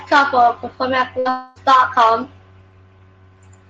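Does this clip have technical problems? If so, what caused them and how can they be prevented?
Yes. A burst of packet loss runs from 1.19 to 1.27 s, right after "couple performing at". About 60 ms of audio never arrived, and the receiver stretched the last sound into a fading buzz or hiss to cover the gap, then resumed with that stretch missing. Adding forward error correction or a slightly deeper jitter buffer would help recover short bursts like this.

A long network dropout follows from 1.29 to 1.58 s. The sound is held and faded for roughly a quarter of a second before the audio returns, with about 260 ms skipped. The likely cause is the network connection stalling entirely for that stretch. A more stable link, such as wired instead of congested Wi-Fi, or redundant transmission paths would prevent it.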